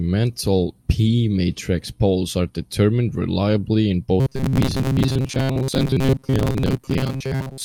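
A speech recording in which, from 4.20 s to the end, just after "are determined reliably in", the voice turns into a rigid metallic buzz near 133 Hz: robotic sound from repeated short buffers. The likely cause is audio arriving too seldom, so the player loops its last 7.5 ms or so, skipping most of the real signal.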